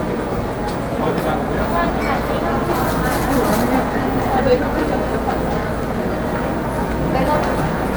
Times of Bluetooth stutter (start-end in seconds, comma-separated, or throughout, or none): none